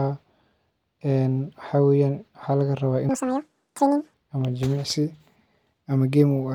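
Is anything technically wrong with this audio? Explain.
Yes. From 3.09 to 4.14 s there is a section at the wrong speed: that stretch of speech plays back at twice its recorded rate, likely because it was resampled or clocked at the wrong rate. Speed and pitch jump together, so the speech becomes hurried and chipmunk-like, about ten semitones higher. On a spectrogram, harmonics and formants shift abruptly upward there. On the waveform, syllable envelopes look compressed to half their width.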